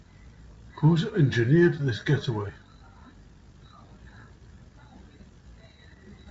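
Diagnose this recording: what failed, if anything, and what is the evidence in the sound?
Nothing has failed: the speech carries the wideband character of G.722 telephone coding at 64 kbit/s, with the codec's own damage at most faint and no stage in the chain showing a breakdown.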